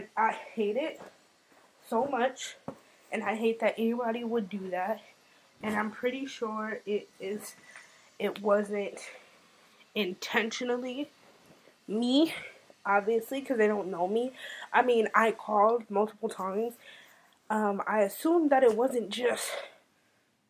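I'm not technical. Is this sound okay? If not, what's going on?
Yes, it sounds fine, with nothing wrong anywhere along the way.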